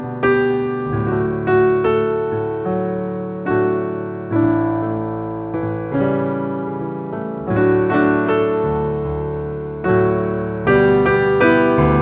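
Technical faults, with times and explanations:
No technical faults can be heard in the clip. It has passed through a WebRTC call path, and nothing reaches above 4 kHz, which fits a narrowband G.711 mu-law codec at 64 kbps.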